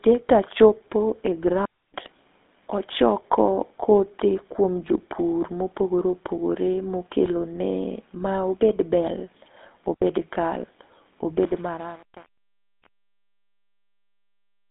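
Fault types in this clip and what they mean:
GSM full-rate codec, throughout: the speech passes through a coder that models the vocal tract and rebuilds it from sparse, regularly spaced pulses. This gives a plainly audible buzzy, gravelly roughness, with the band held to about 200 Hz to 3.6 kHz and nothing above 3.8 kHz.
Digital wireless dropout, at 1.65 to 1.94 s and 9.94 to 10.02 s: the receiver lost too much data and muted with a very quick fade. This leaves clean holes of near silence, roughly 288 ms and 78 ms long, with no burst of noise on either side.
Truncation distortion on a fade, from 11.46 s to the end: the fade-out passes through an undithered stage that fits about 7 bits. As the level sinks, the waveform collapses into coarse steps, so the tail grows gritty.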